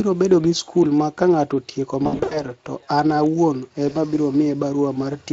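Throughout the clip the speech carries Speex codec damage that is plainly audible: a hoarse, noisy texture where the excitation is coded coarsely, which points to a mid-range bitrate of roughly 20 kbps. On a spectrogram, harmonics look smeared and grainy rather than cleanly striated, and any energy above 8 kHz appears as a diffuse, noise-like wash instead of distinct structure.

From 2.03 to 2.44 s, VoIP packet loss concealed by the speech codec breaks the flow. About 200 ms of audio went missing, scattered across 280 ms, with the longest gap near 80 ms. The decoder filled each hole by repeating its last pitch and filter at falling gain, so the sound is stretched into a fading tone or noise, then weak, and stays distorted briefly after real audio resumes. A spectrogram shows flat, repeated bands fading in steps, and the waveform shows decaying envelopes. A single short gap from 3.89 to 3.94 s produces a brief blip and dip.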